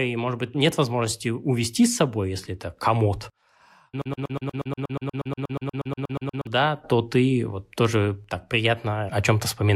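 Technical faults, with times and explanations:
4.02–6.47 s: broken-record loop. A 120 ms speech fragment repeats 20 times. Likely a stalled stream replaying its last buffer. The intended speech is lost.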